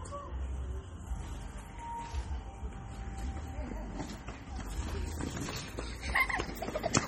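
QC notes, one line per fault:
Throughout, MP3 compression: heavy watery, swirling texture, metallic chirps and smeared attacks as weak frequency lines flicker between frames, likely from coding at a rate fitting about 32 kbps. Unlike simple filtering, content still reaches about 21.6 kHz.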